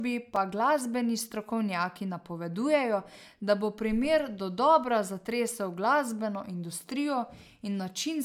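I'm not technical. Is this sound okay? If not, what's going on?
No. A block of digital silence sits at 0.36 s, just before "pa glasbeni strokovnjaki". For about 4 milliseconds the speech is replaced by silence, then comes straight back with no fade. That abrupt cut in and out makes a small tick rather than an audible gap. This usually happens when the playback or recording software fails to deliver the next chunk of audio in time, leaving an empty patch in the stream.

Generation loss runs through the whole clip. The speech sounds swirly, smeared and hollow, and the starts of sounds lose some of their crispness. The likely cause is that the recording was saved as an MP3, opened and saved again as an MP3 about three times. Each round of compression throws away a little more detail in a slightly different place, so the damage builds up beyond what a single save would cause.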